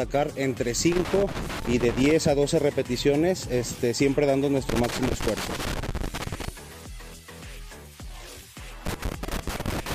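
Loose connector crackle shows up three times, at 0.92–2.11 s, 4.69–6.49 s and 8.86 s to the end, where a worn contact keeps chopping the signal into scratchy pops.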